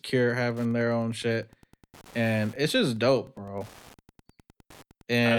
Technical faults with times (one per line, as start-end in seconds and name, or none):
0.00-5.38 Wi-Fi interference